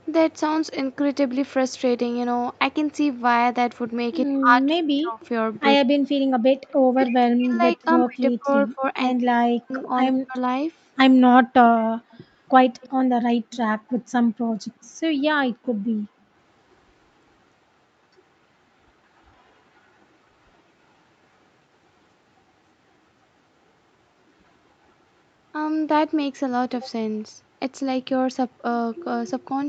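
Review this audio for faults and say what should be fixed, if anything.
Speech suppressed in double talk, from 4.27 to 10.36 s, then 13.06 to 13.35 s and 14.30 to 14.37 s: the talker's level repeatedly sinks, by roughly 40 dB at worst, for around three seconds in total across the first stretch and briefly in the later two. This is likely an echo canceller that could not tell the near talker from the far side's loudspeaker signal while both spoke, so it attenuated everything together. Prevention: use a canceller with proper double-talk detection and lighter residual suppression.

Echo leak, at 6.69 to 6.73 s and from 11.8 to 15.66 s: a faint delayed copy of the voice trails the original by 100 ms. It is a quick scrap at very low level in the first instance, then a longer, more noticeable stretch, around 25 dB below the speech. The cause is likely a loudspeaker-side echo canceller that left part of the microphone pickup uncancelled and sent it back. 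Prevention: improve the canceller's adaptation and lower speaker volume or use a headset.

Background gated by the echo canceller, at 13.73 to 13.88 s and 15.78 to 16.31 s: the room sound drops out abruptly, by about 40 dB and then about 35 dB, for roughly 150 ms and half a second, before returning. The canceller clamped the microphone hard while the loudspeaker was active, taking the ambience down with it. Prevention: replace hard gating with gentler suppression and comfort noise that fills the gaps.

The call microphone processing, which leaves nothing above 8 kHz, is expected and needs no fix.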